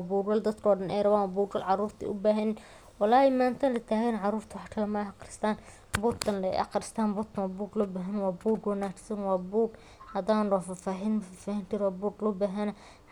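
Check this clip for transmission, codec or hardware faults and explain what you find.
No faults turn up anywhere in the clip.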